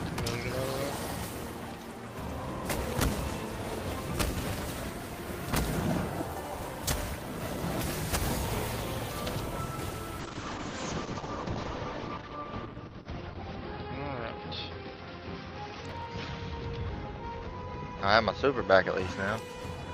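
From 10.21 to 19.05 s a call bitrate drop takes the encoder from 32 to 8 kbps, bottoming out for 3.36 s. The audio turns muffled and rough as the spectrogram's top edge falls from 20 kHz to 6 kHz. From 15.88 to 16.05 s a processor overload crackle adds gritty tearing. Several missed deadlines, which fits buffers of around 10 ms, replay stale audio and appear as hard-edged waveform discontinuities and thin vertical spectrogram streaks.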